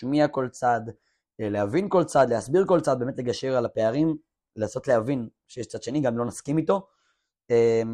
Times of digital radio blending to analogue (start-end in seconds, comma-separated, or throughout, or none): none